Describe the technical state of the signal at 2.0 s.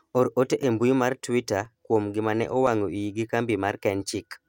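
At 2.0 s the speech sits inside a run of periodic USB or driver dropouts from 0.63 to 3.70 s. Every 1.02 s, roughly 2 ms is blanked to silence, giving regular ticks.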